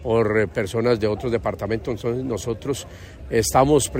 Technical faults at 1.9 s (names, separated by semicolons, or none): none